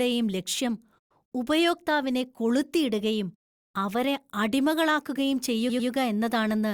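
At 5.69 to 5.89 s, right after "ഉപയോക്താവിനെ കൊളുത്തിയിടുകയും അവരെ അടിമകളാക്കുകയും", the speech has repeated frames. A 100 ms block of compressed audio plays two extra times, a stutter that adds 200 ms. A spectrogram shows the same 100 ms pattern copied side by side.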